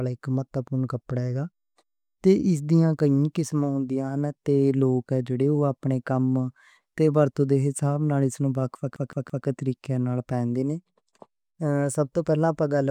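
At 8.96 s the speech catches on a CD stuck on one turn, lasting until about 9.46 s. A damaged spot sends the laser back by one track each revolution, so a fragment roughly 168 ms long plays three times in succession, each jump marked by a brief mute. The result is a rapid, evenly spaced stutter with a fixed rhythm before playback moves on past the fault.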